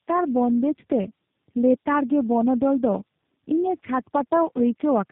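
Tandem speech coding affects the whole clip. The speech has passed through several speech codecs in a row, about four, each decoding and re-encoding what the previous one had already damaged. The losses stack up. Nothing remains above 3.8 kHz, so the sound is muffled and narrow. The speech sounds rough and grainy, with a warbling, watery quality. The character fits a chain ending in a low-rate 8 kbit/s coder such as G.729A.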